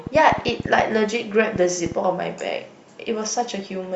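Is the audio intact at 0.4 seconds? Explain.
No. From 0.07 to 1.93 s a train of clicks runs through the speech, likely from interference or a faulty connection injecting pulses. About ten similar clicks arrive unevenly at roughly 5.4 per second, popping out about 10 dB above the speech.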